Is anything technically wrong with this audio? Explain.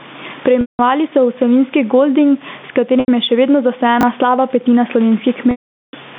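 Yes. Three kinds of fault are present.

Gain pumping runs through the whole clip. The input gain is likely set far too high, so a fast limiter or compressor clamps down whenever the speech gets loud, swinging the level by roughly 15 dB. Loud and quiet passages are pressed toward the same level, giving a squashed, breathing quality.

Packet loss with pitch repetition occurs three times: 0.61 to 0.79 s (180 ms missing), 3.00 to 3.08 s (80 ms), and 5.51 to 5.93 s (420 ms). In each gap the receiver loops the last pitch cycle it received and fades that loop out over roughly 50 ms. The longer losses fade into silence before speech cross-fades back in. The gap lengths suggest 10 ms packets.

Chunks out of order appear at 4.01 to 4.03 s. A 10 ms piece of audio arrived one slot late and plays after the piece that should follow it. No audio is lost, but the sequence is scrambled and creates three abrupt joins. 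The result is a tiny jumbled stutter.

The steady room noise sits about 33 dB below the speech, within the narrow 150 Hz to 3.6 kHz telephone band of the G.711 line.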